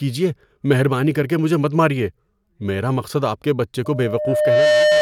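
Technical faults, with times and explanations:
3.85 to 5.01 s, loudspeaker feedback squeal: a 605 Hz tone swells over roughly 0.7 s until it sits about 5 dB above the speech, as the mic-to-speaker loop runs away at that one frequency.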